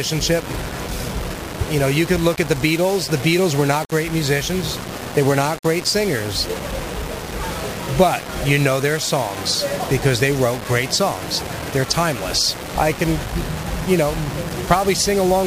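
The signal has likely been reduced to about 5 bits and rounded to those few levels with no dither added, and this affects the audio for its whole length. With so few steps, the rounding error tracks the waveform instead of spreading into a steady hiss. It gives a grainy, gritty distortion whose texture shifts with the sound, sitting only around 15 dB below the signal. Quiet passages suffer most, turning gritty.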